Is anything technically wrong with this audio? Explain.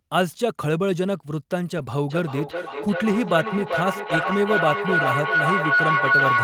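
Yes. Two kinds of fault are present: lost packets rebuilt from error correction, twice, and a feedback howl that runs to the end.

Lost packets rebuilt from error correction occur at 1.77 to 1.83 s and again at 4.09 to 4.31 s. There is no dropout; the decoder filled each loss from a low-bitrate redundant copy carried in the following packet. Those stretches sound rougher and noisier than the surrounding speech. The first covers about 40 ms, which fits two lost packets; the second about 120 ms, which fits six.

A feedback howl starts at 2.1 s and continues until the clip ends. A microphone is picking up a loudspeaker carrying the same call, and the loop gains level on each pass, so the repeats build instead of decaying and collapse onto the frequency the loop favours, roughly 1.5 kHz. The loop's round-trip delay is roughly 0.4 s, and the tone peaks about 3 dB above the speech.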